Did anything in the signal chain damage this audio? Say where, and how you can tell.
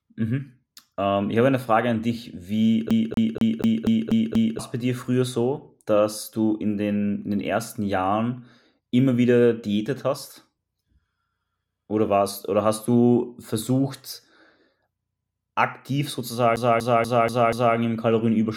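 Yes. The speech gets stuck on one turn of the CD, at playback. From 2.9 to 4.59 s the same 241.5 ms slice repeats seven times, and from 16.56 to 17.77 s five times, with a brief mute at each jump. The loop length is identical every time, which marks a skipping disc rather than a network buffer repeat.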